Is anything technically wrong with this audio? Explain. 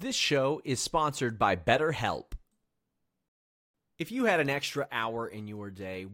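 Yes. Two faults are audible.

At 3.28 s there is a rebuffering stall. The player ran out of buffered audio and had to wait for more data. The speech cuts to silence for about 0.46 s. It then picks up exactly where it broke off. No speech is skipped. The pause simply adds time, so the phrase around 3.3 to 3.7 s sounds like an unnatural hesitation rather than a dropout.

At 4.87 s there is a sudden gain jump. The level falls by about 6 dB in a single step and stays down to the end of the clip. There is no fade. The speech and the background noise drop together, which points to a change in digital gain rather than anything the talker did. The likely cause is a gain setting or bit shift applied without a ramp. The step itself can carry a small click.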